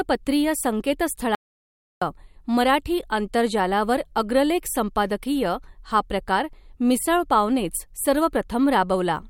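At 1.35 s the speech cuts off mid-flow and returns at 2.02 s, an audio dropout to silence lasting about 0.67 s. The input was likely lost for that moment, perhaps through a disconnected device or a stray mute, while recording carried on writing silence. What sets it apart from a noise gate closing is that the gap is dead silence with no room tone at all, and both edges are abrupt rather than faded.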